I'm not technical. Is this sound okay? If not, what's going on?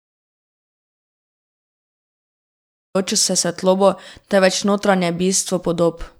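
No. The speech starts in an audio dropout to silence: from 0 to 2.95 s there is dead silence with no room hiss, unlike a natural pause, until "se svetlobo". The input was likely lost.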